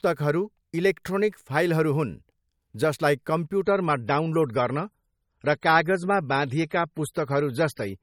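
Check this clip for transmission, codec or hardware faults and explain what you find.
There's one fault here: the adaptive stream switches to a lower bitrate at 3.63 s and stays there to the end. The quality drops suddenly with no gap, the top thins out with nothing above 18.8 kHz, and codec artefacts rise. That fits the player falling back from roughly 128 to 32 kbit/s MP3 when the connection slowed.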